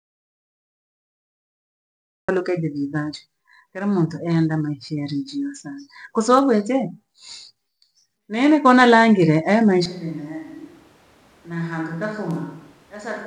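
A speech recording that opens in an audio dropout to silence: from the start to 2.28 s there is silence with no room tone, and the audio comes in mid-flow at "de vii vancho", likely a lost input while the recorder kept writing silence. At 9.86 s, right after "nene kona langile e", the sound switches to a distant microphone through to the end, turning abruptly hollow and thin, about 10 dB quieter, with room noise about 25 dB below the speech, likely because the close mic's feed was lost.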